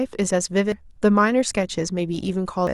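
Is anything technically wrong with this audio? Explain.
Yes. Damaged data in a compressed stream produces brief glitches at 0.72 s and 2.67 s in this speech. Corrupted bytes make the decoder misread frames and hunt for the next valid header.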